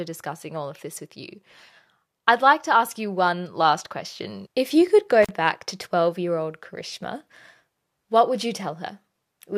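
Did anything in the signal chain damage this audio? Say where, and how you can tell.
Yes: an intermittent contact in the analogue wiring. At 5.23 to 5.31 s the speech breaks for about 42 ms, with crackle at the edges and faint hiss rather than a clean digital dropout.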